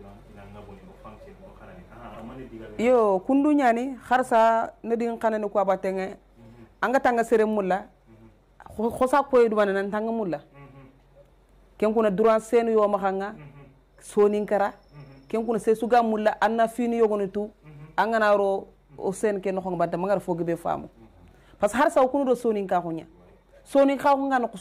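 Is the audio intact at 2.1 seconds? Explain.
No. From 2.10 to 2.16 s there is a brief glitch, heard as a chirp, squawk, click or short hole, where the audio breaks. This is damaged data in a compressed stream. Corrupted bytes make the decoder misread those frames and lose sync until it finds the next valid frame header.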